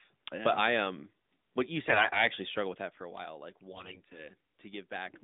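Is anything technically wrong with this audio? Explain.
Yes. AMR bit errors occur twice in this narrowband mobile speech, which is band-limited to about 150 Hz to 3.7 kHz, consistent with AMR-NB's 12.2 kbps mode. The first runs from 1.86 to 2.28 s, between "I um what you" and "struggled with that for". The second runs from 3.72 to 4.28 s, just after "for a while like". On a weak link, about a tenth to a seventh of the less-protected bits were flipped while the checksum still passed. The decoder therefore placed excitation pulses wrongly and used slightly wrong pitch, gain and spectral values. Pitch and loudness roughly hold, but the voice turns hoarse, scratchy and gargly. The later burst has the higher error rate.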